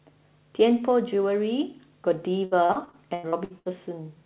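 From 2.45 to 3.68 s the speech breaks up with repeated packet loss, giving a robotic sound. Nine short holes, the longest 91 ms, are patched by stretching the previous sound. About a third of that stretch is filled this way, so it sounds choppy. The call path, with nothing above 4 kHz, suggests a G.711-type codec.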